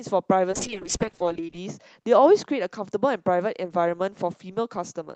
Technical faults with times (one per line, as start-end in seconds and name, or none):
0.52-3.77 call bitrate drop